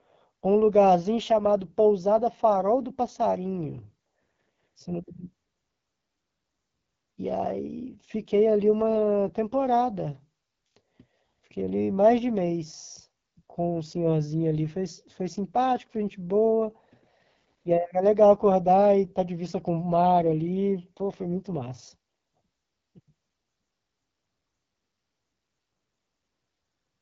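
AMR wideband (HD Voice) codec damage runs through the whole speech clip, plainly audible as a rough, raspy texture. The codec models the voice with pulse-driven vocal-tract synthesis, and its harshness fits one of AMR-WB's lowest modes, around 8.85 kbit/s. Nothing sounds above about 7.5 kHz.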